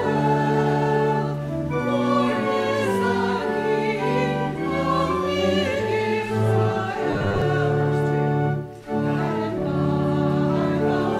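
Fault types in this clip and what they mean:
Robotic sound from repeated short buffers: from 7.11 to 7.42 s the sound turns into a rigid, metallic buzz at 100 Hz, with about half of it repeated. The likely cause is audio arriving too seldom, so a 10 ms slice loops while real audio is skipped.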